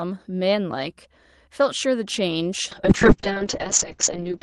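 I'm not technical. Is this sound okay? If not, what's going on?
No. From about 2.75 s to the end, the speech suddenly turns rougher, watery and duller. This is a call bitrate drop. The call's connection seemed to weaken, so the Opus codec was forced to describe the sound with far less data. It coded everything more coarsely and cut the upper treble, from about 12 kHz down to about 8 kHz. Unlike dropped packets, the audio has no gaps or clicks. The quality just steps down and stays down.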